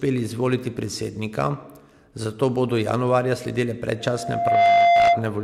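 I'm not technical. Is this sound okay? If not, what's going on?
No. Right after "januarja sledile", at about 3.99 seconds, a loudspeaker feedback squeal starts. It's a single steady tone at 692 Hz that swells up in under a second and ends up clearly louder than the speech. It lasts until about 5.27 seconds. This happens when a microphone picks up the loudspeaker it feeds. The sound loops round and round, and one pitch keeps growing by itself.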